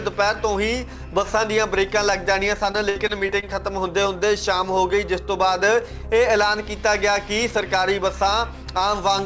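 From 2.72 to 3.44 s, repeated packet loss gives a choppy, robotic stretch: about six short holes, the longest 58 ms, each patched by extending the preceding sound. Unlike a single dropout, the gaps recur in quick succession, concealing roughly a fifth of that span.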